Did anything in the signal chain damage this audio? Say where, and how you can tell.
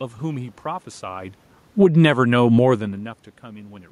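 Yes, the call processing's automatic gain control is pumping the level. The first problem is automatic gain falling, from 1.66 to 2.16 s. Over that half second the whole signal sinks by about 11 dB, and the room noise sinks right along with the sound. That's the giveaway: a talker backing off would only drop the direct sound. Here the AGC judged the input too hot and pulled its gain down.

Straight after, from 2.07 to 2.85 s, there's automatic gain rising. The input level dropped by about 21 dB, which fits the talker shifting position around 2.5 s, and the AGC answers by slowly winding its gain back up about 6 dB. You can hear the sound and the background swell together over most of a second rather than jumping. That slow joint rise is the gain stage chasing the level, not anything happening acoustically in the room.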